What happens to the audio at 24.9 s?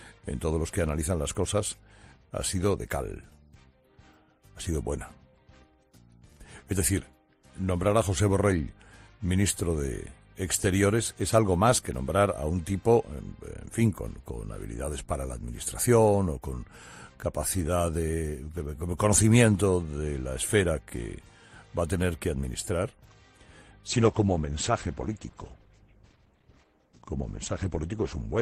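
At 24.9 s the clip is inside a drop to a lower bitrate in the adaptive stream, running from 23.86 s to the end at 28.42 s. When the connection slowed, playback switched without a gap to a leaner encoding, consistent with Opus falling from about 64 to 16 kbit/s. Nothing remains above 8.4 kHz, so the treble disappears and codec artefacts are more audible.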